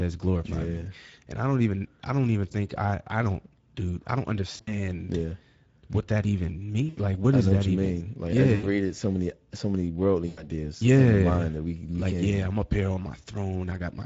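Speech with a constant hoarse, noisy grain, and a thin, hissy upper band that sounds like shaped noise rather than real detail, is the mark of the Speex codec at a middle quality setting, around 16.8 kbps, where the excitation gets too few bits. At 4.51–4.76 s, 6.89–6.98 s, 8.55–8.69 s and 10.27–10.45 s the speech smears into a fading buzz or coloured noise and stays weak just afterwards. This is VoIP packet loss concealed by the speech codec, which extrapolates from its last pitch and filter and lowers the gain.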